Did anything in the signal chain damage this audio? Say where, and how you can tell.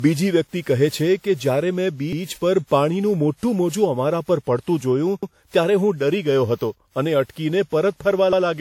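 Yes. Throughout the speech there is generation loss at the codec stage: a swirly, hollow, smeared quality with softened attacks. This likely comes from roughly ten lossy re-encodes, consistent with WMA at around 96 kbit/s. Each pass adds fresh quantisation noise. A spectrogram shows patchy holes and blurred onsets, with content reaching 20.1 kHz.

At the chunking or buffer stage there are overlapping chunks. A 100 ms stretch repeats at 2.13, 5.23 and 8.33 s, evenly spaced by the 3-second chunk length, and each one is heard as a stutter-click. The waveform shows the same short segment duplicated at each join, with a visible discontinuity.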